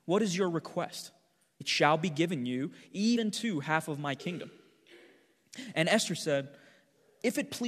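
At 1.6 s, between "is your request" and "shall be given you", the speech jumps forward. This is compressed frames skipped: about a tenth of a second of audio never plays, which fits roughly four 21.3 ms frames being lost or rejected by the decoder.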